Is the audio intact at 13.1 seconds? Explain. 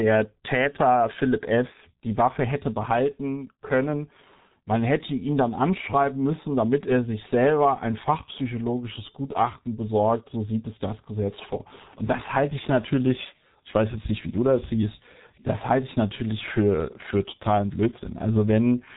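No. At 13.1 seconds, as throughout the speech, the signal has passed through the G.723.1 codec, an early internet-telephony coder that models the voice in coarse 30 ms frames, and the heavy damage points to a rate near 6.3 kbit/s. Its slow model updates smear consonants and leave the voice hoarse, while nothing above about 3.8 kHz survives, so the sound is muffled and dull.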